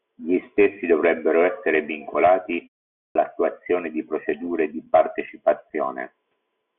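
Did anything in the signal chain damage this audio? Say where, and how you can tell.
Yes. At 3.06 s, after a pause of about 0.46 s, the speech resumes abruptly with about 93 ms of its onset missing. This is a clipped start after a pause at the playback stage: the output device dozed in the silence and was late waking. Muted pauses, by contrast, lose no speech.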